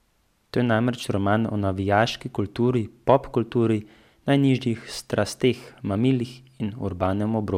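No technical faults can be heard at any point in the recording. Nothing in the speech audio points to a problem anywhere along its length.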